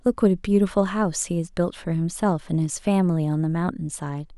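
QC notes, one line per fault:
No faults heard in this speech clip.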